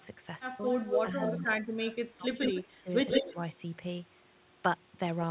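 From 0.65 to 2.77 s an echo leak, likely from a loudspeaker echo canceller letting sound through, repeats the speech about 175 ms late and about as loud, showing as doubled, offset waveform bursts and smeared spectrogram harmonics. Between 1.47 and 2.88 s the speech is suppressed in double talk, likely from the canceller ducking both sides. For about 0.7 s in total it dips by around 20 dB, with the waveform notched and the spectrogram thinned. A second echo leak at 3.1 to 3.48 s returns 150 ms late and somewhat louder than the speech, and within it, from 3.22 to 3.36 s, a briefer suppression cuts roughly 10 dB.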